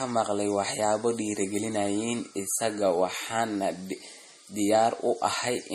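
From start to finish the speech carries a watery, swirling texture, with faint components flickering in and out and a hard ceiling above which nothing sounds, at 14.6 kHz. This is likely MP3 compression at a low bitrate, which fits roughly 40 kbps, where the encoder drops weak frequency lines frame by frame and trims the treble. Unlike a simple low-pass filter, which would only dull the top, the warbling that moves in time marks it as codec damage.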